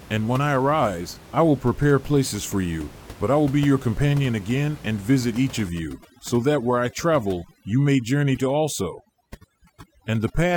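From 5.69 s, right after "again and visit each", to the end, overdone noise removal sets in: bands near the estimated noise are pushed to near silence, so the room noise, about 20 dB below speech, gives way to twinkling specks. A spectrogram shows blackened gaps with isolated bright dots.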